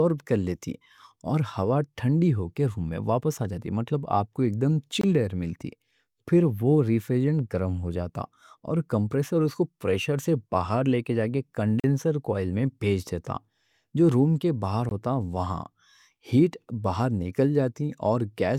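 At 5.01–5.04 s, 11.80–11.84 s and 14.89–14.91 s the speech drops to blocks of digital silence, about 21, 43 and 21 ms long, which fits output buffers of 1024 and 2048 samples left unfilled. Unlike a fade or concealed dropout, each cuts out and back abruptly.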